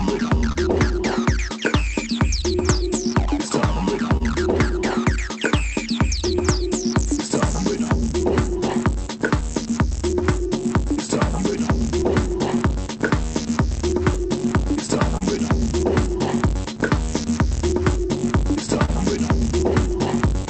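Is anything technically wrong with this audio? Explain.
Yes, there are timing faults throughout.

Clock drift between sender and receiver runs the whole clip. The sender's clock is about 2% slow, so the receiver's buffer keeps draining and timing wobbles slightly, visible as unevenly spaced waveform seams.

Repeated timing corrections run from 0.02 to 19.93 s. The receiver repeats short pieces, slowing playback to 99% and adding roughly a fifth of a second. If heard at all, it is a faintly unsteady tempo, and the waveform shows duplicated cycles.

A short stall from a late packet occurs at 0.52–0.57 s. The buffer ran empty and the last sound was stretched for 29 ms, heard as a brief held sound and seen as a smeared, static spectrogram column.

Scattered short gaps appear in three stretches: about seven in 3.13–9.44 s, about five in 11.50–15.23 s, and about three in 18.32–20.45 s, each up to roughly 30 ms. 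Late packets were patched by extending the previous sound, producing tiny ticks or smears that show as thin vertical streaks. The call codec's band limit is also visible as a spectrogram ceiling near 8 kHz.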